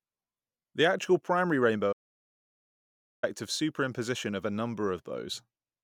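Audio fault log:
1.92–3.24 s, playback stall: right after "actual primary" the speech cuts to silence for about 1.3 s, then resumes. The gap is dead output rather than a fade, most likely because the player ran short of buffered data or its thread was blocked.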